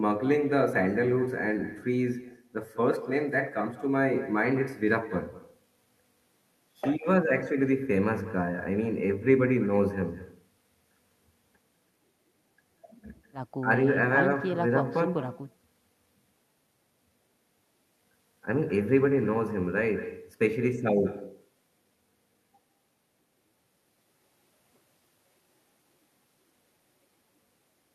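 Echo with no canceller runs throughout this speech recording: every phrase is followed about a fifth of a second later by a fainter copy, roughly 16 dB below the direct sound, and thinner. The far end is playing the call through a loudspeaker, its microphone is catching that playback, and no echo cancellation strips it out, so the talker's own voice returns after the network round trip.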